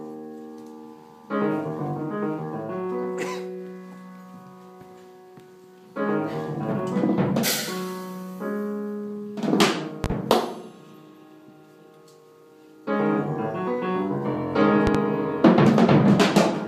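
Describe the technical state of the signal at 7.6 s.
At 7.6 s the signal is intact, with no audible technical fault at that moment.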